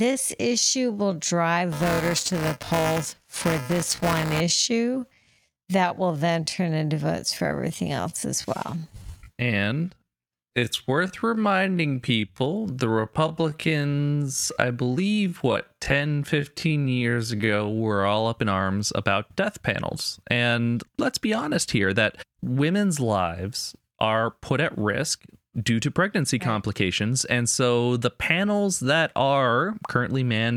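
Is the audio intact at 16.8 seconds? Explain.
No: a time-stretched section runs from 0.0 to 18.16 s, slowed to 0.632x speed, likely by software repeating short pieces to hold pitch, so the speech drags.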